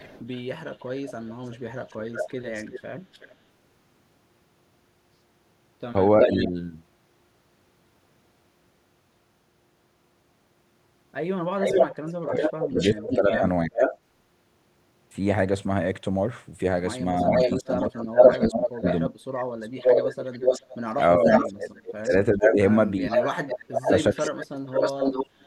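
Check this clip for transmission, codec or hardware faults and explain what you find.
Two faults recur in this speech: echo leak and speech suppressed in double talk, often overlapping.

Echo leak occurs at 0.0–3.34 s, 6.21–6.48 s, 11.6–13.97 s and 17.27–25.26 s. A delayed copy of the speech returns 362–431 ms later, around 20 dB down at first and later about as loud as the original. The likely cause is a speakerphone's echo canceller failing to remove what its microphone picked up. Unlike room reverberation, this is a distinct repeat rather than a smeared tail.

Speech suppressed in double talk appears at 6.26–6.56 s, 11.65–13.79 s, 17.23–19.18 s and 20.95–25.46 s, where the talker dips by about 10 dB at first and by about 25–30 dB later, in broken pieces. It likely arises when the canceller, confused by simultaneous talk, turns down both its own talker and the echo. Unlike packet-loss dropouts, the dips follow the overlapping talk rather than random gaps.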